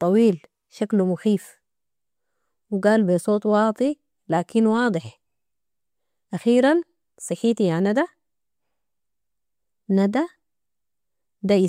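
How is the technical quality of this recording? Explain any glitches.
No glitches or technical faults can be heard anywhere.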